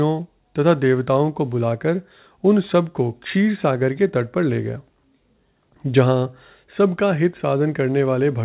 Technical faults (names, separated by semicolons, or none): none